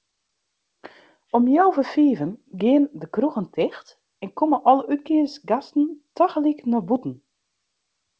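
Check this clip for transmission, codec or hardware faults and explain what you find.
No transmission, codec or hardware faults turn up in this speech clip.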